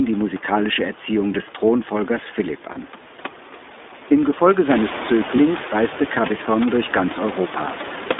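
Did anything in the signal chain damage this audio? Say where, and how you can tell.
Yes. At the codec stage, the iLBC codec is plainly audible throughout, with a roughened, synthetic texture. The band stops at 250 Hz and 3.6 kHz, which fits a telephone line band, with iLBC running at 15.2 kbps in its 20 ms mode.

At the network stage, there are lost iLBC frames at 2.72–2.79 s (40 ms) and 5.36–5.39 s (20 ms). Instead of silence or a click, the decoder repeats a pitch cycle with noise, producing a held buzzy or breathy sound. The speech recovers immediately afterwards because each iLBC frame decodes independently.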